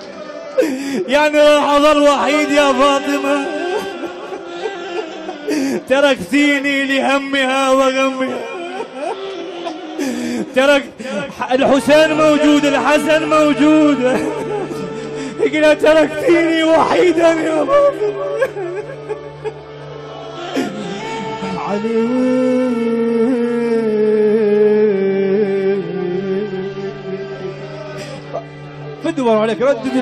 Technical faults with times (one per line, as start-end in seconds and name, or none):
none